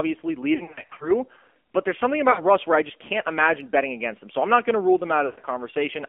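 Throughout, the AMR narrowband mobile codec confines the speech to roughly 250 Hz to 3.4 kHz. Its buzzy, synthetic timbre fits a low rate near 7.4 kbps.

From 0.56 to 1.11 s, lost AMR speech frames cause scattered warbling dips. They total about 220 ms, with no gap longer than 40 ms, as the decoder repeats faded parameters. After "but there's something", 2.32 to 2.45 s is drawn out and fades. After "not going to rule", 5.26 to 5.41 s smears and sinks toward silence.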